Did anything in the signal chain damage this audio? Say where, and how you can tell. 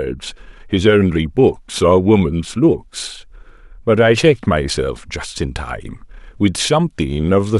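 Yes. Sample clock jitter at the converter runs through the whole speech clip. A faint hiss rides on the louder, brighter sounds, and the pauses stay clean, unlike a constant noise floor. A clock wobbling by a fraction of a microsecond leaves errors about 50 dB below the signal, largest where the waveform slopes steeply.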